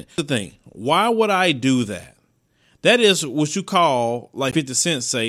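A speech clip with one Bluetooth stall between 4.51 and 4.59 s. The sound drops to silence for about 14 ms, then resumes. This is likely interference delaying packets, so the headphones' buffer ran empty and playback paused until the resent packets arrived.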